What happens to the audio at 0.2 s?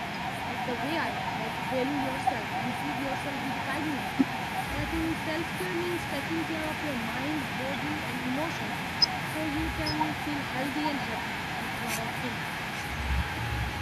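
An echo canceller, likely caught by both sides talking at once, pulled the speech down by about 25 dB from 0.0 to 0.5 s: speech suppressed in double talk.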